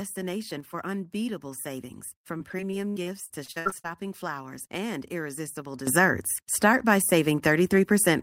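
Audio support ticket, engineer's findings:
Sudden gain jump, 0.60–0.74 s: level drops about 5 dB instantly, noise floor with it. Likely a gain setting applied without a ramp. Recurs 5.87 s to end, up about 12 dB, same step.

Repeated packet loss (robotic sound), 2.37–3.86 s: 12 gaps, longest 78 ms, about 27% of span patched by stretching prior audio. Choppy result.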